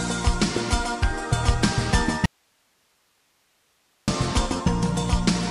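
At 2.26 s the sound cuts off abruptly mid-flow and stays gone until 4.08 s, a gap of about 1.8 s. Nothing is left but low hiss, roughly 45 dB below the normal level, before the audio snaps back in just as suddenly. This is an audio dropout to a faint residue. The hard edges rule out a pause or fade, and the likely cause is the source being lost while the path after the break stayed live, passing only its own noise floor.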